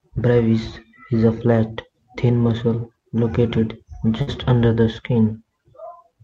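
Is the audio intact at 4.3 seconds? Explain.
No. Right up to 4.30 seconds the speech is replaced by a short concealment sound, a held buzz or fading hiss carried on from what came just before, and then it jumps ahead with part of the speech missing. This is a burst of packet loss spanning 4.21 to 4.30 s. Several consecutive packets never arrived in time, so the receiver stretched and faded the last sound for about 56 ms, and about 60 ms of the original audio is gone.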